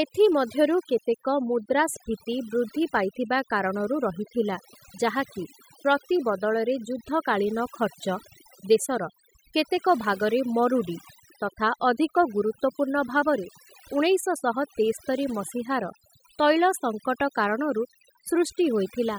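Overdone noise removal runs through the whole of this speech recording, from start to finish. A noise reduction stage was pushed too hard: wherever a frequency band sat close to its estimate of the background noise, it cut that band deeply or removed it, and softer parts of the voice were taken away with the noise. The pauses drop to near silence flecked with twinkling specks.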